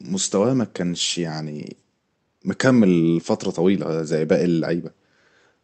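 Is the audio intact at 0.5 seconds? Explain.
Yes, the speech at 0.5 seconds is intact, with nothing beyond the ordinary character of the WebRTC call path, whose codec limits the top end to about 8 kHz.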